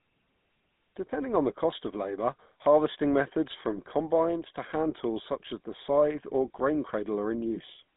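From start to finish the speech carries GSM full-rate codec damage. The band is narrowed to roughly 150 Hz to 3.6 kHz, so nothing bright remains. The codec models the vocal tract and drives it with coarse, regularly spaced pulses. That leaves a buzzy, gravelly roughness across every phrase.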